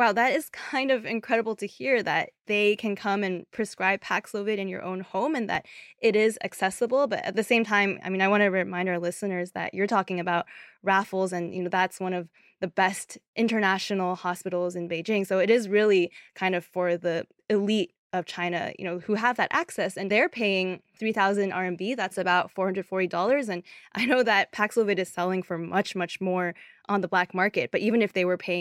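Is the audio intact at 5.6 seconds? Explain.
No. A single loud pop sits from 5.55 to 5.58 s, between "your own home and" and "it is accessible", peaking roughly 5 dB above the speech. It is likely a voltage spike from a switch or static. Unlike a dropout, the speech continues underneath.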